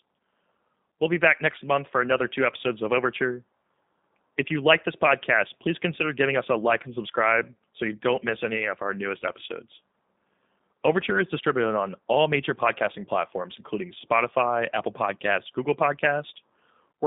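Throughout the speech, G.729 codec damage is plainly audible: a line band of 200 Hz to 3.7 kHz, plus a rough, buzzy, slightly synthetic texture from rebuilding each 10 ms frame from a few pulses, consistent with 8 kbit/s. A merely band-limited line would sound narrow but clean.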